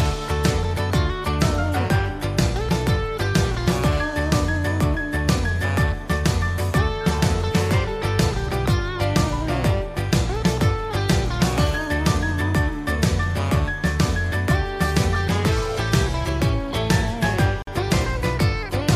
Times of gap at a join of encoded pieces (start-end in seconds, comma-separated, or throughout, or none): 17.62-17.67